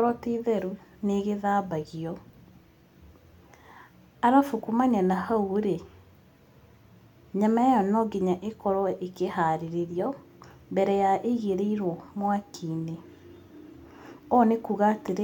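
No technical faults can be heard anywhere in the recording.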